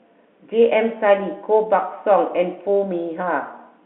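Nothing goes wrong anywhere in this speech clip, which simply carries the usual narrow sound of a G.711 telephone line, roughly 250 Hz to 3.5 kHz, the way such a line normally does.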